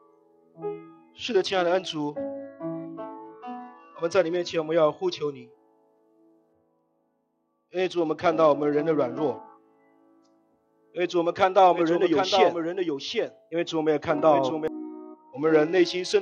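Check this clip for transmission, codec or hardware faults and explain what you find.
Two kinds of fault are present: three Bluetooth SBC bit pool drops and one stretch of doubled audio track.

The Bluetooth SBC bit pool drops run from 1.28 to 4.37 s, from 6.53 to 9.46 s, and from 14.85 s to the end at 16.22 s. In each, the treble turns dull and a gritty quantisation noise rises; in the first two it clears when the rate recovers. This happens when the sender cuts the encoder's bit allocation to survive a congested link, starving the upper sub-bands and coarsening the rest. The degree of loss fits a bit pool falling from 28 to 9, around 78 kbps.

The doubled audio track runs from 11.72 to 14.68 s. A second, full-band copy of the sound trails the original by roughly 0.7 s, about 5 dB quieter, with no reverberant tail or room colouring, and it appears and vanishes abruptly at those boundaries. 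The likely cause is the same signal reaching the mix twice, either through a slower second capture path or an edit leaving two misaligned copies overlapped.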